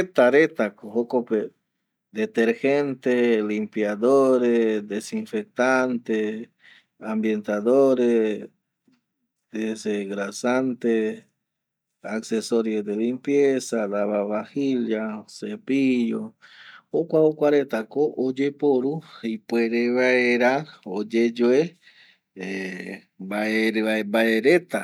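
Listening to the speech recording, nothing stood out as a technical fault at any point.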